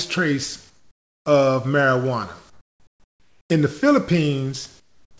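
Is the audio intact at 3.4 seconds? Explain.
No. From 2.50 to 3.50 s, including 3.4 s, the real background is replaced by comfort noise: a steady, featureless hiss, about 13 dB quieter than the background it covers, which sits about 36 dB below the loud passages. The likely cause is discontinuous transmission: the sender stops transmitting when it detects silence, and the receiver fills the gap with synthetic noise shaped to the background's rough spectrum, so its detail disappears until the sound resumes.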